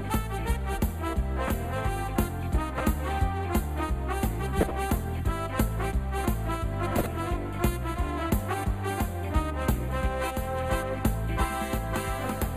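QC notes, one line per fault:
1.47–1.65 s, 2.69–2.81 s, 4.61–4.71 s and 6.97–7.06 s: corrupt frame decoded. Each is a short chirp or noise burst of about 0.1 to 0.2 s. Several damaged compressed frames were played anyway. Misread gains and codes put energy at wrong frequencies.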